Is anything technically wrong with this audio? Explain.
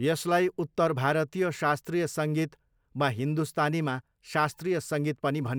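No, nothing is technically wrong with this audio.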